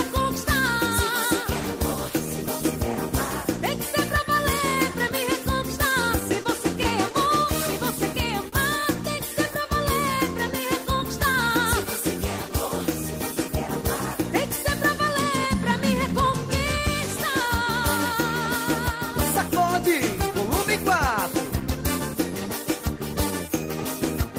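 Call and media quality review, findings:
Short stall from a late packet, two events: 6.43–6.47 s and 8.49–8.54 s. Jitter buffer ran dry when packets arrived late; receiver stretched the last sound to cover the gap, 16 ms then 38 ms, and resumed at the same point. Nothing lost, but the audio is held too long at each spot, with a faint buzz or dip. End-to-end delay grows by the same 16 ms and 38 ms.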